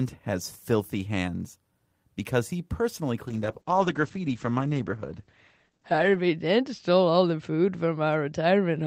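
From 3.28 s to the end, a call bitrate drop makes the speech rough, watery and muffled, with the top end narrowing from 20 kHz to 8 kHz. The sound suggests a fall from about 32 to 10 kbps, lowest for 2.95 s. Unlike packet loss, there are no gaps or dropouts.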